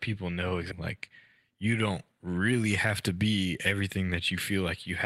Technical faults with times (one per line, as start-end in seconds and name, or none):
0.71-0.73 skip ahead
0.81-3.97 jitter buffer speed-up